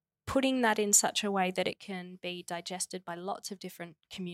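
Likely one channel drops out from 1.73 s to the end, after "such a way that", so the mono-summed speech abruptly falls by about 6 dB.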